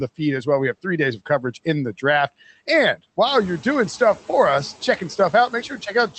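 Noise suppressor catching up, from 3.26 to 3.67 s: the room noise jumps by about 12 dB at around three and a half seconds, and the suppressor's noise estimate is still set for the quieter floor. For roughly 0.41 s the noise comes through with less reduction, then sinks by about 7 dB as the estimate adapts, settling just before "stuff for us checking". Through the call path the audio stays band-limited near 8 kHz.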